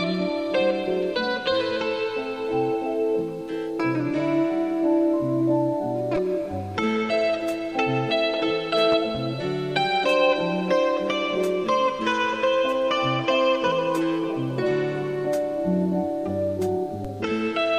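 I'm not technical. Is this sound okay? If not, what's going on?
No. A DC step at 6.16 s and again at 17.05 s: the signal's resting level suddenly jumps, giving a low thump that then fades away while the sound continues.

A loud pop, actually two quick pops between 8.92 and 9.18 s, sits on top of the sound, likely from a sudden electrical jolt such as a plug, switch or static.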